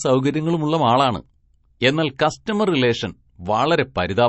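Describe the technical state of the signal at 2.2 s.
A hiss rises out of the quiet just before an onset at 2.18 s, and the attack itself lands soft and smeared rather than crisp. This is pre-echo. The attack falls late in a transform block, and the quantisation noise the encoder sized for the loud portion spreads evenly across the whole block, including the near-silent stretch ahead of it. Here that leaked noise reaches back about 14 ms before the attack.

Around that moment, and through the rest of the speech, the sound is watery and swirly. Sibilants carry a metallic, chirpy edge, and nothing is present above 8 kHz. The likely cause is MP3 compression at a setting starved of bits, which fits a 32 kbps encode. The encoder has cut the treble at a fixed frequency and zeroed weak spectral lines, and those lines flicker on and off from frame to frame.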